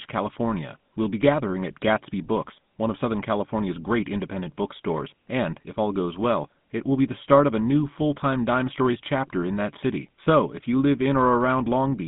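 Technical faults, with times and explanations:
Throughout: GSM full-rate codec. Speech sounds buzzy and gravelly, with nothing above 3.8 kHz, consistent with 13 kbps pulse-excited coding of a 150 Hz to 3.7 kHz phone band.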